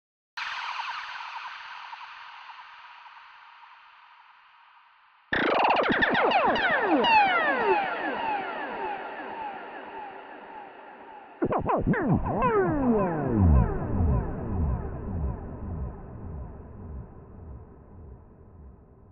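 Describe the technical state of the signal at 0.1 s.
At 0.1 s the signal is pure digital silence, part of a cut-off start that runs from 0.0 to 0.37 s. Capture began late, so the audio is joined mid-sound at 0.37 s with no natural attack or fade-in. On the waveform this shows as a flat line that jumps straight into the signal. On a spectrogram it appears as an empty band across all frequencies, ending in a hard vertical edge where the content appears at once.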